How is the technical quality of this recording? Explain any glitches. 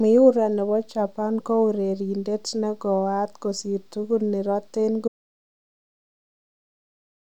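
The recording has one clear fault. At 5.08 s there is an audio dropout to silence that runs to the end. The speech stops mid-flow and about 2.25 s of silence follows, with no room tone. The input was likely lost while recording continued, writing silence.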